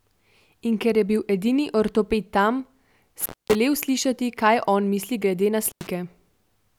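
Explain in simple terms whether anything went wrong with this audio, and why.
The speech cuts out twice because of an intermittent contact, a loose cable or plug briefly opening. Around 3.20 to 3.55 s it drops for about 240 ms before "slišati kaj on misli," and after "on misli glede na" at 5.65 to 5.87 s for about 90 ms, with crackle at each edge.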